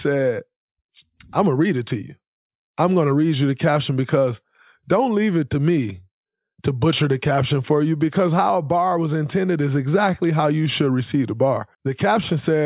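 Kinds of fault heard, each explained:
No technical faults can be heard anywhere in this speech recording, with no interruptions, distortion, level problems or other defects in the signal.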